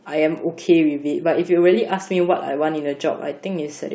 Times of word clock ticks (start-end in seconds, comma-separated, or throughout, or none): 0.37-3.71